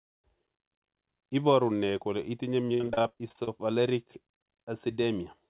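From 2.67 to 3.59 s, just after "kole itinye", repeated packet loss (robotic sound) struck the call. Packets kept going missing, with gaps up to 60 ms. Concealment stretched the preceding sound over roughly 43% of that stretch, so the speech turns choppy and robotic, with pieces dropped out.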